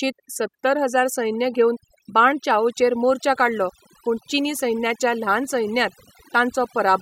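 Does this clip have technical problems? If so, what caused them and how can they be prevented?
Yes. Overdone noise removal runs through the whole speech recording. A noise reduction stage set far too aggressively pulls individual frequency bands down or out whenever they sit close to its noise estimate, so the quieter parts of the speech are removed along with the noise. Between phrases the background drops and breaks up into twinkling specks. On a spectrogram this shows as scattered isolated dots in the gaps and ragged, patchy harmonics. Prevent it by using gentler reduction settings and checking the result by ear.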